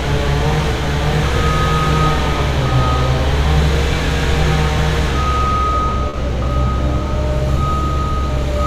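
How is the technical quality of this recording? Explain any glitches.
The recording has one audible glitch. At about 6.09 to 6.15 s there is a short concealed packet loss. Roughly 40 ms of audio never arrived in time for the decoder. The receiver covered the gap with a guess. It extended the preceding sound, following its pitch where there was one and using shaped noise where there wasn't. Then it faded back into the real signal. You hear a brief smear or wobble there, and a very short sound in that window can disappear.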